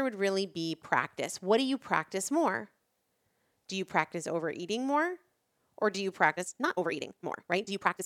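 Right after "or do you", at 6.31 s, the speech lurches forward into a time-stretched section that runs to the end, playing about 1.69 times faster with the pitch unchanged. It sounds rushed, likely from software dropping short slices to squeeze it shorter.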